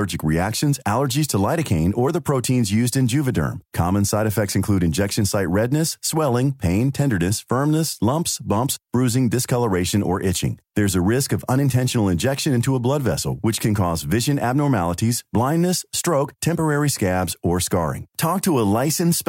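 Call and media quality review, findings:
No audible faults found on review of the speech recording; nothing to log against any component.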